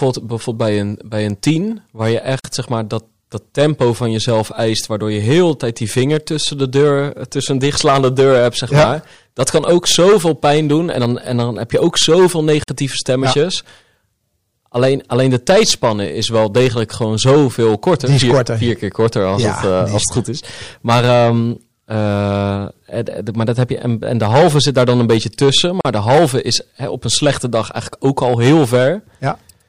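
The speech has hard clipping all the way through: it's driven about 13 dB past full scale, so a few percent of samples get flattened, giving harsh fuzz on loud syllables. There's also a gap at a join of encoded pieces at 2.40, 12.64 and 25.81 s. Each is a 41 to 47 ms dropout where separately encoded chunks were butted together untrimmed, leaving encoder delay and padding.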